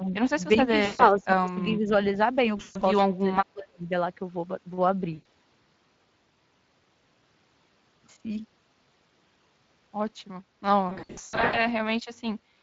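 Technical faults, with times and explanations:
throughout: Speex codec. Speech has a hoarse, noisy grain, with the top of the band reduced to a hissy, shaped fill instead of real detail. The damage is plainly audible and fits a Speex setting of around 20 kbps. The coder spends too few bits on the excitation signal behind each frame, so fine texture is replaced by noise. Because it is present everywhere, it is not tied to any event.
0.00–0.13 s, 0.57–1.60 s, 1.76–1.92 s, 3.01–3.91 s: speech suppressed in double talk. The level sags. The dips are slight at the start and near 1.8 s, about 15 dB in the 0.57–1.60 s stretch, and about 30 dB around 3.0–3.9 s, where parts nearly cut out. The likely cause is an echo canceller that treats overlapping far-end speech as echo and turns everything down. The sound is ducked gain with no buzzy fill, which sets it apart from loss concealment.
0.85–1.04 s, 2.57–2.82 s, 5.13–5.26 s, 10.89–11.68 s: VoIP packet loss concealed by the speech codec. 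The missing audio is 140 ms, 180 ms, 120 ms and 460 ms. The gaps near 2.6 s and 11 s are broken into pieces, with the longest single runs about 120–140 ms. The decoder repeats its last pitch and filter, so the gaps fill with a stretched, buzzy tone or coloured noise that fades. Speech stays weak for a moment after each gap. That smeared tone is what distinguishes these from clean double-talk dips.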